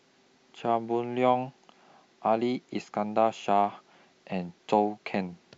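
No technical faults are audible.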